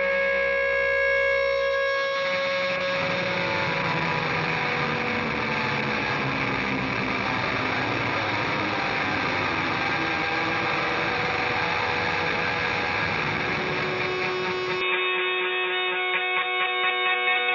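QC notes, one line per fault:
14.81 to 17.55 s, input switched to a poorer device: sound abruptly narrows to nothing above 3.8 kHz with faint new background noise, likely a cheaper mic taking over.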